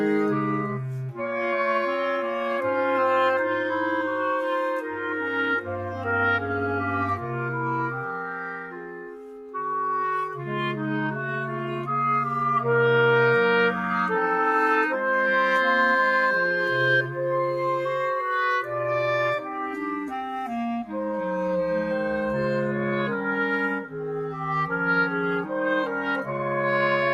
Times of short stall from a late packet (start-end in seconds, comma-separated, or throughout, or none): none